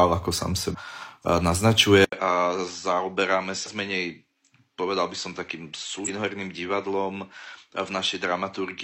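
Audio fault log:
0.70–0.76 s, 3.63–3.69 s, 6.04–6.09 s: damaged data in a compressed stream. Corrupt frames make the decoder lose sync and hunt for the next header, leaving a brief glitch at each spot.
2.04 s to end: input switched to a poorer device, likely. After an 80 ms gap, nothing is heard above 7.6 kHz. The audio turns duller, about 10 dB quieter, and carries a faint new noise floor.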